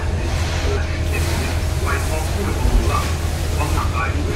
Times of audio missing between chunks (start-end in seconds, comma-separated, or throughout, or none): 0.77, 2.27, 3.77